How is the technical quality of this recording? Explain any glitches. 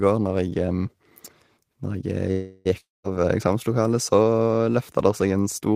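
The recording has two connection glitches close together in the middle of the speech.

From 2.31 to 2.69 s there is a call audio freeze. Packets were likely held up, so the jitter buffer ran empty and the receiver stretched the last sound into a fading buzz for about 340 ms. Speech then resumes where it stopped, now running later. On a spectrogram this shows as smeared, flattened horizontal bands in place of normal speech texture.

From 2.80 to 3.06 s there is a long network dropout. About 240 ms of audio likely never arrived. A brief buzzy continuation decays into roughly 180 ms of silence, and the speech returns with that portion missing. The waveform shows a short tapering tail followed by a flat gap, and the spectrogram shows a blank vertical band.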